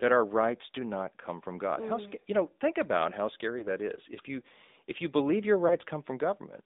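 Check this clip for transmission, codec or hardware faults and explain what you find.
Two faults are present: AMR narrowband mobile codec coding throughout, plus two lost AMR speech frames.

The AMR narrowband mobile codec runs throughout. Its 8 kHz sampling and the line band confine speech to 200 Hz–3.7 kHz, and pulse-driven vocal-tract modelling adds buzzy, synthetic texture, fitting a mid-rate mode near 10 kbps, unlike plain band-limiting.

Lost AMR speech frames occur at 3.60–3.67 s and 5.68–5.77 s. The decoder repeated prior pitch and vocal-tract settings at falling gain, producing brief warbling dips rather than the hard silent gaps of packet dropouts.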